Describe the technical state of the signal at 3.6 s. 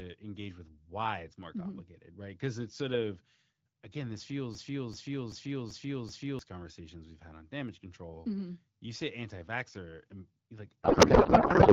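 At 3.6 s the speech is intact with no fault present, carried through the AMR wideband (HD Voice) codec at 12.65 kbit/s, a rate at which it stays clear.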